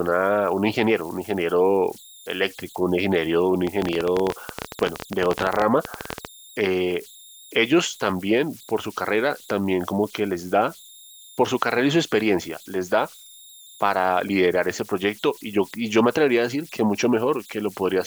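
Converter idle tones run through the whole speech clip: an undithered converter settles into repeating bit patterns, leaving a faint whistle near 4 kHz, about 26 dB below the speech, visible as a thin horizontal spectrogram line. From 3.67 to 6.26 s, a train of clicks, about 17.5 per second at irregular spacing, pops well above the speech, likely interference from nearby equipment. These show as sharp waveform spikes and thin vertical spectrogram streaks.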